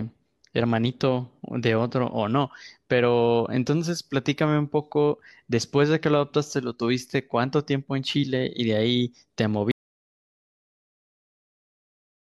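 Speech runs until 9.71 s, then cuts off mid-flow into dead silence that lasts the remaining 2.55 s to the end of the clip, with no room tone, hiss or reverb tail carrying through. This is an audio dropout to silence: the input was likely lost, through a disconnected device, a broken link or an accidental mute, while the recorder kept writing silence, so whatever followed that point is simply gone.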